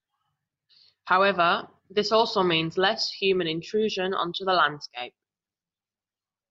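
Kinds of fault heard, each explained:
Nothing in this bit of speech stands out as a fault, so there's nothing to list here.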